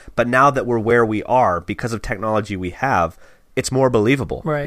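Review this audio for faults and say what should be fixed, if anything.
At 0.90 s the speech has a tiny dropout of about 4 ms. It is a block of digital silence: a run of samples was replaced by zeros, so the waveform drops straight to nothing and jumps back with no fade. At this length the gap itself is too short to hear as a hole. The zeros come either from an output buffer that wasn't filled in time or from a calculation that produced invalid values. To prevent it, give the audio thread enough buffer headroom to finish on time and guard the processing against invalid values.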